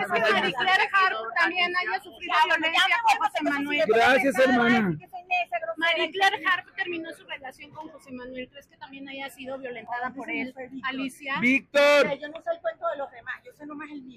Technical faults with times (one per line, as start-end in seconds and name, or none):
0.64-2.25 channel delay (comb filtering)